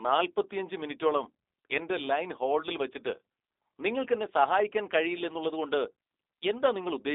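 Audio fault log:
throughout: G.729 codec. Nothing above 3.8 kHz survives and the band runs from 300 Hz to 3.7 kHz, so the speech sounds narrow. Each 10 ms frame is rebuilt from a filter, pitch predictor and sparse pulses, giving a plainly rough, synthetic grain that fits 8 kbit/s G.729A.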